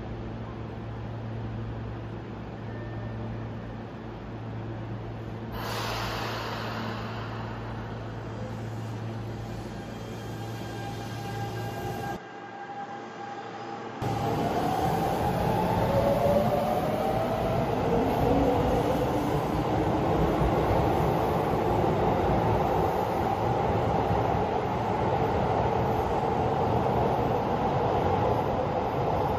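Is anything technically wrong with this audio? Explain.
Yes. From 12.16 to 14.02 s the sound turns duller and drops by roughly 10 dB. Nothing above 7.6 kHz gets through in that stretch. There is no gap at the change, and a faint new background noise appears, far below the signal. The likely cause is an input switched to a poorer device. The recording moved to a narrower-band microphone or headset profile with its own tone and level, then switched back.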